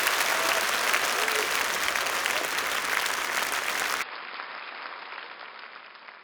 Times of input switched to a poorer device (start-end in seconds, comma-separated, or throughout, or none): 4.02-6.23